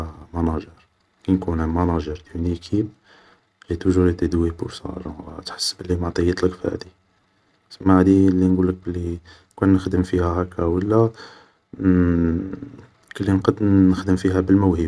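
A speech recording whose signal shows no technical fault anywhere in its duration.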